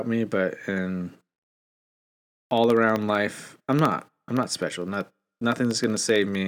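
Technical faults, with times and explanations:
1.17–6.41 s, periodic USB or driver dropouts: after "me but in", tiny silent gaps every 64 ms give steady ticks as the driver repeatedly loses audio.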